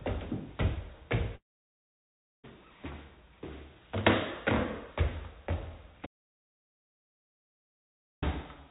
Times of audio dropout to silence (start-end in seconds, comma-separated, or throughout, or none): 6.06-8.22